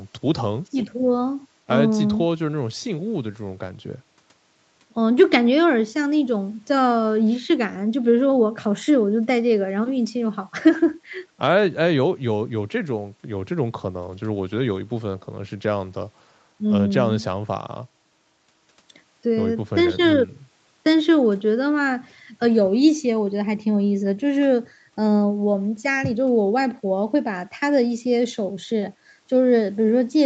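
Speech, with no faults heard.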